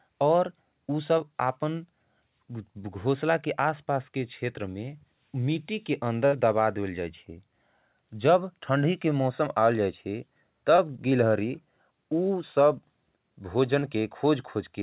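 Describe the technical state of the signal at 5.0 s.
At 5.0 s the speech is intact, carried through a call path whose bandwidth stops at 4 kHz, which fits G.711 mu-law at 64 kbps.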